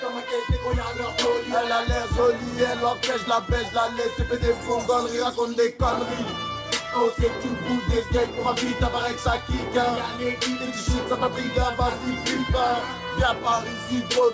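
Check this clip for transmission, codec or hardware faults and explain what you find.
No transmission, codec or hardware faults turn up anywhere in the clip. The audio has passed through a call path, and the absence of anything above 8 kHz fits a wideband codec such as G.722.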